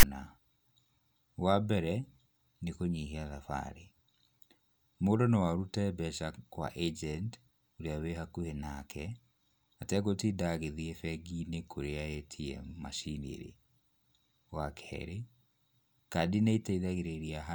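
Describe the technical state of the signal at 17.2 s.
At 17.2 s the speech signal is intact, with no audible fault at that moment.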